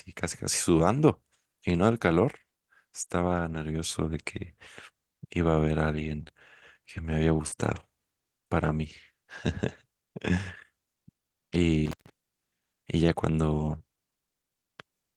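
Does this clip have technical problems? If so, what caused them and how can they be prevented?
Yes. Between 3.45 and 8.91 s, about four network packets arrived late or not at all, roughly 100 ms in total with the longest gap near 40 ms. The receiver filled each scattered short gap by extending the preceding sound, leaving brief ticks and smears. A larger jitter buffer or a more stable network connection would prevent this.

From 11.86 to 12.10 s, an intermittent contact in a cable or plug opened the line for about 0.15 s, so the audio drops out with crackle at both edges. Securing or replacing the connector would prevent it.

From 13.58 to 13.76 s, lost packets were rebuilt from error correction, which fits five 20 ms packets. The decoder played the low-bitrate backup copies carried in following packets, so about 100 ms sounds rougher and noisier rather than missing. Reducing packet loss on the link would prevent it.

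From 13.78 to 13.82 s, short concealed packet loss meant about 20 ms never reached the decoder. The gap was filled by continuing the previous sound, producing a brief smear. A steadier network path would prevent it.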